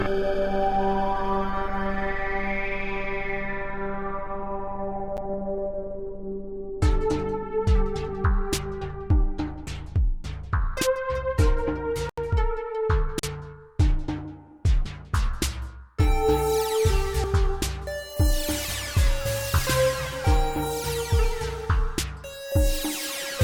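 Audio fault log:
5.17 s, 12.09 to 12.18 s and 13.19 to 13.23 s, block of digital silence: the output buffer likely went unfilled and zeros were sent instead. At 5.17 s this is only 8 ms, so it comes across as a tick. The later gaps of about 82 ms and 40 ms are heard as short holes, where the sound cuts off and returns without any fade.
14.85, 17.24, 18.65 and 19.59 s, dropped buffer (overrun): samples were likely overwritten before the program collected them, and the surviving ends were spliced together. No silence is heard. The sound jumps forward by roughly a tenth of a second, nearer 150 ms at 19.59 s.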